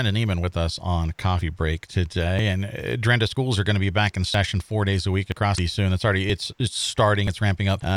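You'll catch a regular skip running through the whole speech clip, at 0.44, 1.41, 2.39, 3.37, 4.34, 5.32, 6.30 and 7.27 s. The first lands right before "us on", and the 5.32 s one comes just after "four days a week." Each is a tiny jump, with a sliver of about twenty milliseconds dropped and the two sides butted together with no gap. Repeating almost exactly once a second, it's likely audio missing between chunks: the pipeline handles one-second blocks and loses a little at each handover.

Shortly after that "four days a week," at 5.55 to 5.59 s, there's a short blip that sounds different. The same thing happens again at 7.77 to 7.82 s. Those are damaged data in a compressed stream. The decoder hits corrupt frames, can't read them properly, and glitches briefly while it looks for the next clean frame header to lock back on to.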